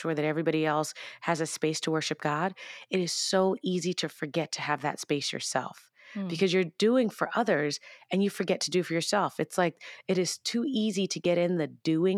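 Tiny skips cut into the speech at 3.27 s, after "it is", at 7.26 s, after "because you're doing", and at 11.25 s, after "it is too easy". Each loses a few milliseconds, recurring every 4 s: audio missing between chunks, likely from 4-second processing blocks.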